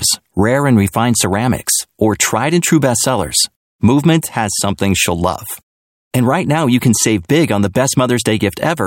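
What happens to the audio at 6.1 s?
Nothing goes wrong at 6.1 s; the speech runs through that moment intact, with no dropout, click or other fault.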